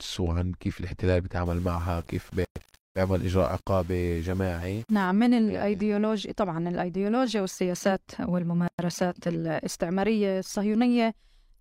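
From 1.46 to 5.05 s, the speech was likely requantised to very few bits, around 7, by plain rounding with no dither. The error tracks the signal, so quiet passages turn gritty and grainy, with distortion about 30 dB below the speech. At 2.45 s, inside that stretch, and again at 8.68 s, there is a gap at a join of encoded pieces: separately encoded segments were spliced without trimming encoder delay and end padding. A gap of about 112 ms and then 110 ms cuts the continuous speech with smeared edges before it resumes where it stopped.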